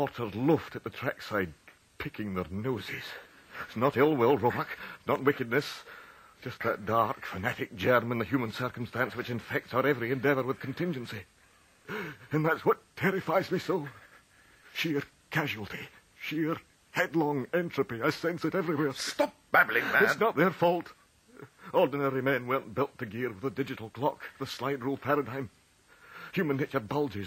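From start to finish the audio carries a gritty, inharmonic fizz riding on its louder and brighter moments, the mark of crude rate conversion. Samples appear to have been repeated to the nearest position rather than filtered, which fits a 32 kHz to 48 kHz step. That leaves a repeating error pattern roughly 25 dB below the signal. Unlike plain hiss, this fizz rises and falls with the material and forms tones that do not belong to it.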